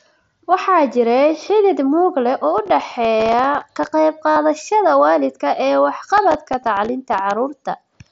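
From 2.58 to 3.91 s, processor overload crackle tears through the speech. The processor keeps missing the deadlines for its tiny buffers, a few milliseconds each. Every miss drops a short patch of silence. Dozens of hard-edged gaps fuse into gritty crackle.

At 4.31 s comes concealed Bluetooth headset packet loss. A run of packets vanished, about 60 ms in all. The receiver filled the hole by repeating recent waveform. It sounds like a short buzzy tone at full level, with a slight warble as real speech returns.

Right after "waalidka ee", from 6.18 to 7.18 s, the processor overload crackle comes back. Again, many missed buffers leave silent gaps, heard as a second burst of tearing grit.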